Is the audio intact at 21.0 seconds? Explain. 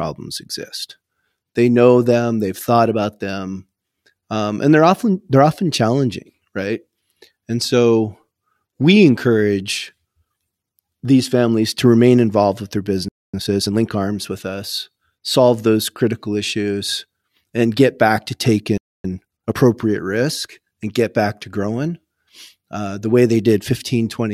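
Yes, the audio is intact at 21.0 seconds, with no fault present at that moment.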